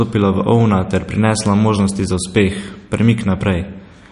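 From start to finish the speech carries plainly audible damage, likely from MP3 compression at a low bitrate, which fits something near 43 kbps. Short of bits, the encoder has cut everything above 10.6 kHz and thinned out weaker frequency detail, so the sound turns watery and swirly, with smeared onsets. On a spectrogram the energy stops at a hard ceiling at 10.6 kHz, and below it the fine detail flickers in and out as isolated patches.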